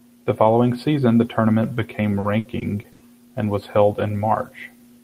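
From 2.19 to 3.02 s, right after "season the tournament became" and before "and was held", the speech breaks up with repeated packet loss, giving a robotic sound. Several short holes open in quick succession, the longest about 80 ms, and each is papered over by extending the preceding sound, about 220 ms of it in all. About a quarter of the stretch is this concealed filler, so the speech turns choppy and robotic, with fragments dropping out.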